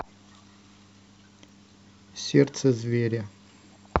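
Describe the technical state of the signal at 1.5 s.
At 1.49 s there is damaged data in a compressed stream. It lasts only about 4 ms. A short blip cuts into the speech there, a brief glitch rather than a clean sound. Some bytes in the coded stream at that point were wrong. The decoder therefore misread the frame data. It lost its place in the stream and had to search for the next valid frame header before decoding could resume.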